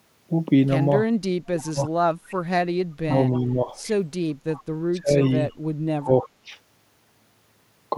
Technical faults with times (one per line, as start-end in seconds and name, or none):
1.24-1.92 speech suppressed in double talk
2.28-2.34 echo leak
3.05-3.74 speech suppressed in double talk
4.55-4.60 echo leak
4.93-5.16 speech suppressed in double talk
5.26-5.31 echo leak
5.99-6.28 speech suppressed in double talk